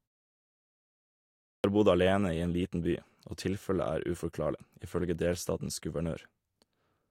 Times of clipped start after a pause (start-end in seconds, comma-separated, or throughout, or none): 1.49-1.64